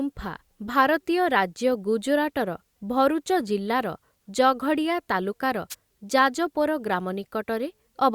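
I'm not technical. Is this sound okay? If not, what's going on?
No. At 5.70 to 5.75 seconds there is a wireless microphone noise hit. The radio link between the microphone and its receiver briefly weakened, as if the signal bounced around the room and partly cancelled itself out. For that instant the receiver's own hiss rose, heard as a quick swish of static, about a twentieth of a second long.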